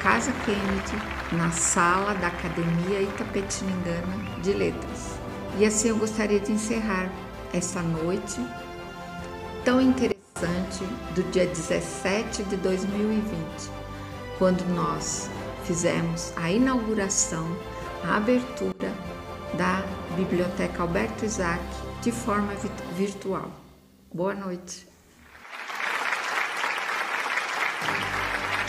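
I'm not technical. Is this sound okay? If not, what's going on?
No. At 10.12 seconds and again at 18.72 seconds, the sound suddenly drops much quieter, background noise included. This is a sudden gain jump. The volume was likely changed instantly, with no fade, so the level steps down abruptly.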